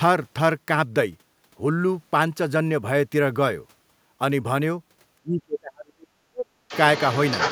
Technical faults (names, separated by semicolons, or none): speech suppressed in double talk; other side's voice leaking through